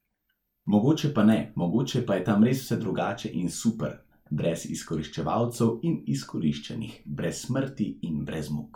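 Nothing stood out as a technical fault on listening to this speech recording.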